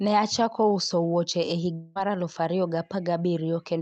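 Speech clip with a long network dropout from 1.73 to 1.97 s. Roughly 0.22 s of audio never arrives, most likely because packets were lost in transit, and the receiver papers over the hole by stretching the last received sound into a smeared buzz that fades without reaching silence. The speech then resumes with that stretch missing. On a spectrogram the concealed section shows smooth, repetitive, fading bands instead of normal speech structure. The waveform fades and loses its natural variation. The call codec's upper limit near 8 kHz is visible across the whole clip.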